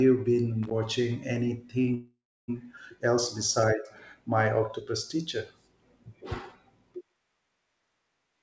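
Loose connector crackle runs from 0.63 to 0.71 s, a brief irregular burst of scratchy crackle lasting about 80 ms. It is the sound of a worn or dirty contact briefly making and breaking as something shifted, so the signal is chopped on and off many times within that short span.

A short stall from a late packet follows at 1.82 to 1.86 s. The receiver's buffer emptied for a moment when the next packet had not yet arrived, so it held the sound it already had for about 23 ms, then carried on from the same point once the data turned up. Nothing is lost. The effect is a syllable held slightly too long, with a slight buzz or dip.

A call audio freeze comes at 1.94 to 2.50 s. The speech stops moving forward for about 0.54 s. The last sound is drawn out as a fading buzz or hiss, then drops to silence for roughly 0.29 s before the speech resumes exactly where it left off. The likely cause is packets being held up on the way, so the receiver's buffer ran dry and it had to wait. 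A gap is inserted rather than anything being skipped. Across the clip the call codec's band limit means there is no content above 8 kHz, which fits G.722 running at 64 kbps.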